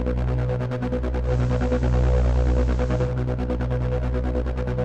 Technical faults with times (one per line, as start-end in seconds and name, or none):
1.22-3.14 digital radio blending to analogue